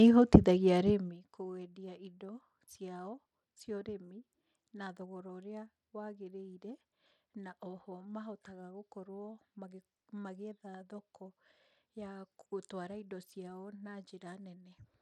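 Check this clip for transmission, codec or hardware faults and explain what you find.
One fault runs through the whole of the speech, and it sounds like Bluetooth SBC compression, most likely from a link starved of bits. Its damage is plainly audible from start to finish. SBC divides the signal into a few wide sub-bands and shares out bits without modelling what the ear will mask. At a rate that fits roughly 96 kbps, the upper bands get little or nothing. The treble therefore thins and flickers, and a gritty quantisation noise and aliasing ride on the sound. Unlike a clean low-pass, the top end comes and goes rather than stopping at a fixed edge, and the grain is coarse rather than the swirly, watery smear of MP3-style coding. The gradual level rises and falls heard along the way are smooth fades of a few tenths of a second to a second or two, not dropouts.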